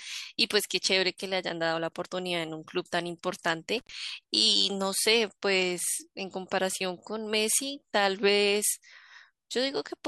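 At 3.78 to 3.92 s, an intermittent contact briefly opens the line for about 80 ms. Speech drops to faint hiss, with broadband crackle spikes bracketing the gap on the spectrogram.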